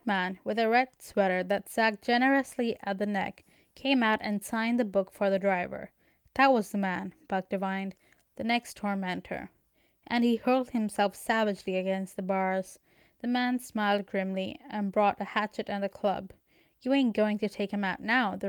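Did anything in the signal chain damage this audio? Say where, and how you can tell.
No, nothing in the signal chain audibly damaged this speech recording. None of the stages from capture to playback leaves an identifiable mark on what can be heard.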